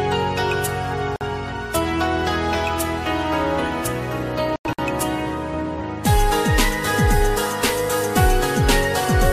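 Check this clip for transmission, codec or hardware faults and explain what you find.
Two brief dropouts break otherwise continuous sound, both gaps at a join of encoded pieces. The first runs from 1.16 to 1.21 s (48.5 ms) and the second from 4.73 to 4.79 s (54.7 ms). Each is a sudden hole of silence with softened edges, after which the sound resumes exactly where it stopped. The cause is separately encoded segments spliced without trimming, so each piece's leading encoder delay and padded final frame were left in at the seam.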